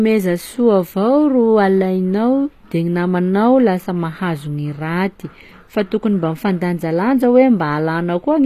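From start to finish, the speech carries HE-AAC compression artefacts. The treble is likely rebuilt by band replication, so sibilants sound gritty and lispy. Nothing remains above about 14.9 kHz.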